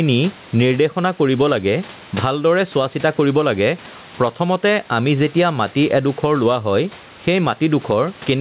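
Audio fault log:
throughout, gain pumping: Gain swings about 10 dB, pulling loud and soft parts closer in level. Likely excess gain hitting a fast limiter.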